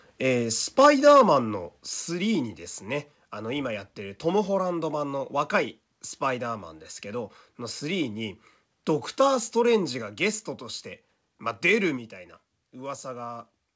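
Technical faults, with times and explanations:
0.79 to 1.22 s, microphone overload: the loudest peaks get flattened, roughly 5% of samples, pushing about 5 dB past the limit. That gives the harsh crackle, likely from input gain set too high.
0.86, 1.86, 10.02 and 11.97 s, microphone volume stepped down: level drops suddenly by about 3, 5, 3 and 3 dB, voice and background together, likely the call software cutting mic gain.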